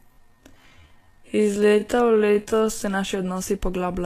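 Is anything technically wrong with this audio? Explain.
Yes. There are two faults.

Time-stretched section, 0.00 to 2.84 s, ending just before "naši odnosi": the speech is slowed to about 0.58 times its speed with pitch unchanged, likely by software repeating short slices. It drags, then the pace jumps back to normal.

Vorbis compression, throughout: the cut-off is lowered, and the treble is quantised so coarsely that detail turns to noise, which points to a low bitrate near 36 kbps, likely from Vorbis. The damage is plainly audible as hissy, grainy sound and blurred attacks.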